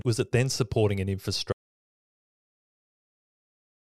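Audio dropout to silence begins at 1.53 s, just after "it then supporting an", and runs to the end of the clip. The speech cuts off mid-flow into dead silence with no room tone, likely because the input was lost while recording continued writing silence.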